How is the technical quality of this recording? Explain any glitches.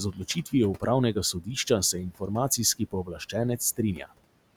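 The recording has two related faults, both from noise suppression, while the room noise sits about 20 dB below the speech.

Noise suppressor artifacts run through the whole clip. The suppressor pulls bands it judges to be steady noise down by about 19 dB, frame by frame, so the background sinks in gaps and swells back under speech. On a spectrogram the noise floor looks patchy and blotchy, with isolated time-frequency specks flickering instead of a smooth haze.

Speech cut by the noise suppressor occurs at 0.12 to 0.53 s, 1.33 to 1.48 s and 2.79 to 3.34 s. In these spans the suppressor mistook quiet speech for noise and turned it down with the background, by about 14 dB in the first two and about 17 dB in the third, affecting roughly 150, 100 and 200 ms in total. The cut speech sounds swallowed or faint. The waveform shows dips in the envelope, and the spectrogram shows missing, faded patches of speech energy.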